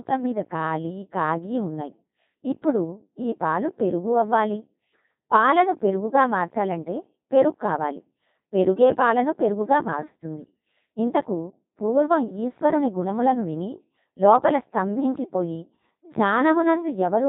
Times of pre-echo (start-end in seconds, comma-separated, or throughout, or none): none